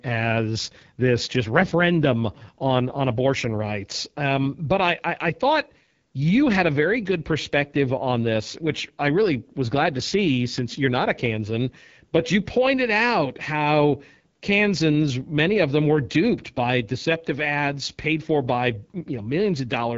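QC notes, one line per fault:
Throughout: AMR wideband (HD Voice) codec. The speech sounds rough and raspy, and the coding damage is plainly audible. The roughness fits the 8.85 kbit/s mode, one of the two lowest. At that rate the pulse-driven model of the vocal tract has too few bits to follow the voice closely. Above 6.4 kHz the band is filled with shaped noise, not real detail. Nothing is present above 7.6 kHz.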